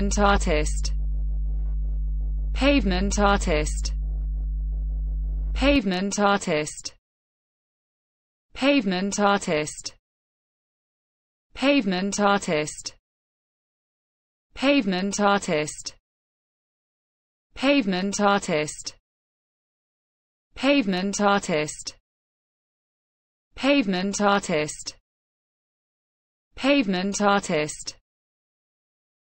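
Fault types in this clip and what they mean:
Mains hum: A steady low tone at 50 Hz sits under the sound from the start until about 5.76 s, along with a few low harmonics. It is strong, only a little below the programme level. Power-line leakage, through a ground loop or a nearby transformer, gets into the signal path.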